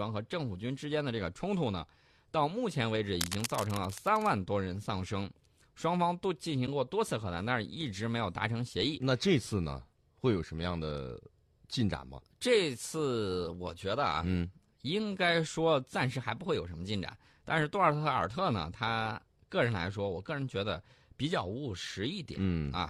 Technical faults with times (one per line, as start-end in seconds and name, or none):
3.21-4.33 cable scratch noise
6.67 AAC frame loss with muting